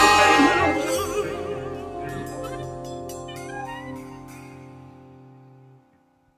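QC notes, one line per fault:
Throughout, noise suppressor applied to music or sounds: a speech-tuned suppressor treats held tones, ambience and decay tails as noise, pulling them down by about 10 dB while attacks pass. Unlike compressor pumping, the level dips follow sustain rather than loud peaks, so tails thin and flutter.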